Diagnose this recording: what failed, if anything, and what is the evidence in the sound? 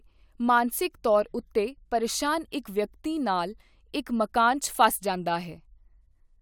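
Nothing in this speech recording points to a failure at any stage of the chain. No audible evidence calls for a diagnosis.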